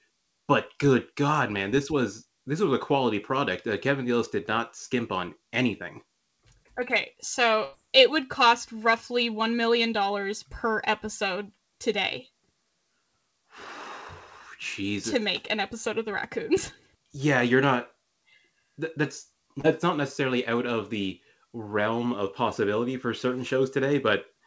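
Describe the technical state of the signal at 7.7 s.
A burst of packet loss from 7.64 to 7.76 s loses 90 ms of audio. The receiver fills the gap by extending the last sound and fading it, and resumes at "it would cost roughly".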